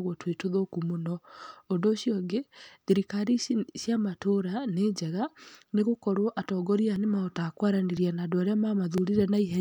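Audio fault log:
5.95–8.98 s: periodic USB or driver dropouts, about four ticks spaced 1.01 s apart, where a recurring driver stall skips roughly 10 ms of speech each time.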